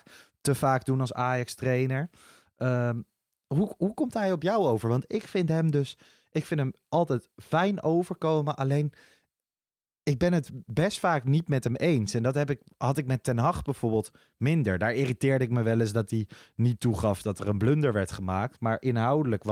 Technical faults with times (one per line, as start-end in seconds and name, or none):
none